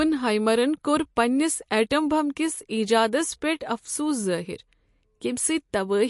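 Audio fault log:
Throughout, MP3 compression. Nothing is heard above 11.2 kHz, so the treble stops abruptly and the sound is dull. The speech has a watery, swirling texture, and the damage is plainly audible. S sounds turn metallic and chirpy. The likely cause is an MP3 encoder short of bits, consistent with a low bitrate of around 48 kbps. It cuts the top band and drops weak frequency lines, which flicker on and off between frames.
1.16 s, pre-echo. A brief hiss, about 10 ms long, arrives just before a sharp onset, so the attack sounds softened and smeared. The onset falls late in a transform block. The codec spreads its quantisation noise across the whole block, so noise sized for the loud part also fills the quiet moment before it. That moment is too quiet to mask the noise, which leaks in as a hiss ahead of the attack.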